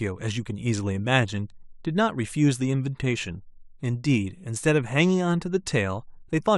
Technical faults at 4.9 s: none

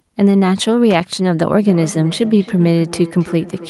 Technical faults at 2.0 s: feedback echo between two devices

